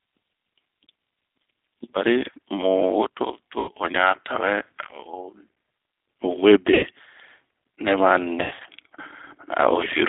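From start to finish the speech passes through the G.729 codec, here the G.729A variant at 8 kbit/s. Only about 150 Hz to 3.6 kHz survives, so a spectrogram shows a flat ceiling with nothing above 3.6 kHz and a thin gap below 150 Hz. Because the codec rebuilds each 10 ms frame from a vocal tract filter, a pitch predictor and a few pulses rather than sending the waveform, the damage is plainly audible: a rough, slightly synthetic grain on every syllable.

At 3.59 to 3.71 s, VoIP packet loss concealed by the speech codec removes 90 ms of audio, which fits three lost packets. The decoder fills the hole by repeating its last pitch and filter at falling gain, so the speech is stretched out and fades. The same thing happens at 6.74 to 6.86 s, again 90 ms. Right after "nɛ ma", from 8.42 to 8.68 s, 180 ms is lost in pieces spread over about 0.24 s, with the longest gap 90 ms. On a spectrogram each gap shows steady, smeared bands instead of changing formants, and the waveform envelope tapers off and then recovers slowly.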